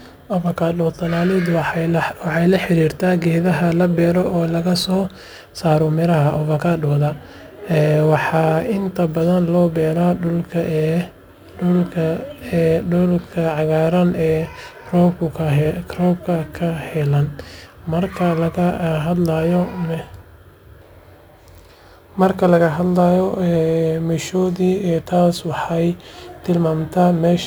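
A gritty, inharmonic fizz rides on the speech from start to finish, strongest on loud and bright sounds and sitting roughly 30 dB below them. This is crude rate conversion: samples were simply repeated rather than filtered, which fits a 44.1 kHz to 48 kHz change.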